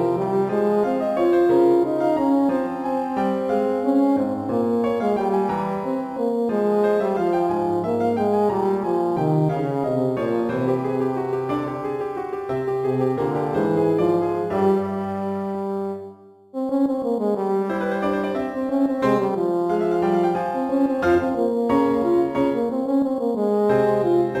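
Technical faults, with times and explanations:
Throughout: crude rate conversion. Samples are dropped or repeated without filtering, fitting a 48 kHz to 44.1 kHz change, which leaves inharmonic fizz about 35 dB down that follows loud, bright passages.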